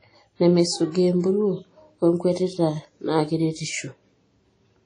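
Throughout the speech, the audio carries plainly audible transform-codec damage, most likely WMA compression at a low bitrate, which fits a WMA 1 stream at around 32 kbps. Nothing is present above 10 kHz. Long transform blocks smear quantisation noise over tens of milliseconds around each syllable, giving a ringing, washy quality, and a hiss that swells and fades with the speech level. Weaker spectral detail is dropped, leaving the sound smeared.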